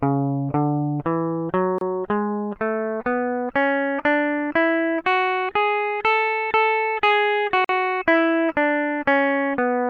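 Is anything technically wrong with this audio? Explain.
Yes. There are two gaps at a join of encoded pieces, at 1.78 to 1.81 s (about 28 ms) and 7.65 to 7.69 s (about 47 ms). The music was encoded in separate segments and spliced without trimming, so each segment's leading encoder delay and final-frame padding remain as silence. The music drops out abruptly, with edges softened by the codec, then resumes exactly where it left off.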